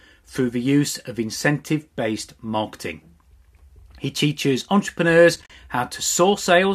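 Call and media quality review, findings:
AAC frame loss with muting, 5.36–5.50 s. Soft-edged holes: 70 ms lost over 140 ms, longest gap about 40 ms. Lost frames zeroed; window overlap fades edges.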